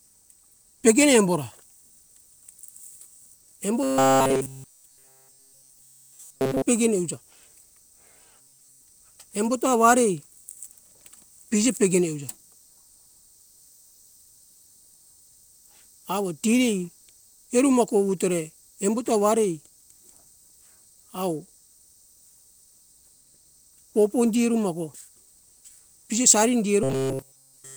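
From 3.83 to 6.62 s (ending before "pegene euja"), 8.41 to 8.83 s, and 26.83 s to the end after "pije sari", the speech becomes a rigid 133 Hz buzz, likely robotic sound from repeated short buffers looping a roughly 7.5 ms slice. Unlike noise or muffling, the buzz pitch stays fixed.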